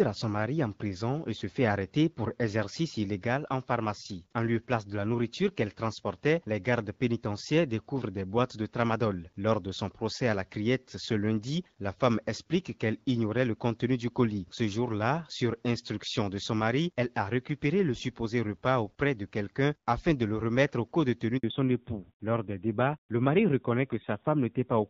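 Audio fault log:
21.38 to 21.44 s, handover gap: the call was passed from one network link to another and, for about 60 ms, no speech frames reached the receiver. The speech fades out within a few tens of milliseconds and leaves a short hole of silence before the new link picks up. Whatever was said in that sliver is gone, which is why the speech sounds clipped at that point.
21.44 s to the end, fallback to narrowband: once the new link was up, the call dropped from the HD Voice wideband codec to an older narrowband one. Nothing above 4 kHz is left, so the sibilants and the airy top that the wideband path carried earlier in the clip disappear and the speech turns duller and boxier. The added roughness fits a low narrowband rate of around 7.4 kbit/s, against the lightly coded, clearer wideband sound before the switch.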